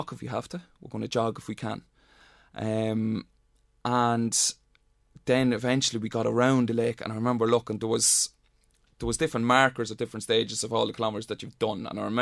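No technical faults can be heard anywhere in the recording, and the signal holds steady throughout.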